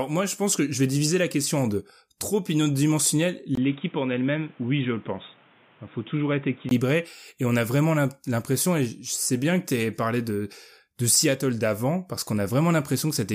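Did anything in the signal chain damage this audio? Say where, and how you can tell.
Yes. Just after "en deux trop unidimensionnel", at 3.55 s, a 20 ms gap precedes narrowed, duller speech with nothing above 3.8 kHz, roughly 5 dB quieter, with new noise about 30 dB down, until 6.71 s. At the driver stage, the input likely switched to a poorer device.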